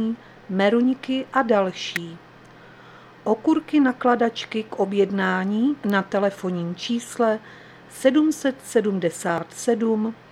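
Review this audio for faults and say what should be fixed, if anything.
Two sharp snaps sit on top of the sound, a loud one at 1.96 s, peaking around -5 dBFS, and a softer one at 5.90 s. That's an electrical switching spike, likely from a nearby switch or motor arcing and coupling a brief burst into the audio line. Keep switched loads on a separate circuit and use shielded, balanced cabling away from them.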